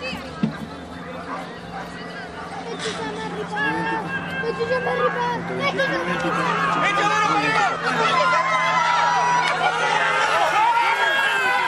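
Nothing here sounds wrong at any point; the audio just carries on as it should, with no fault to point to anywhere along the way.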